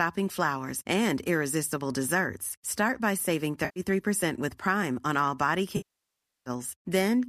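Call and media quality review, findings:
AAC frame loss with concealment, two events. 3.65–3.80 s, after "by saving": 110 ms smeared, noisy patch, spectrogram shows blurred harmonics. 5.77–6.50 s, after "on all body": 690 ms repeated last spectrum decaying to silence, then fading back, visible as a tapering envelope. Loss spacing fits 10 ms frames, likely from the low-delay AAC (AAC-ELD) path.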